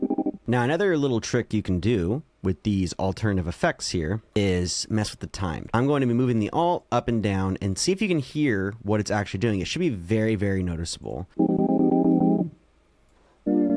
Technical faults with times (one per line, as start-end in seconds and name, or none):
none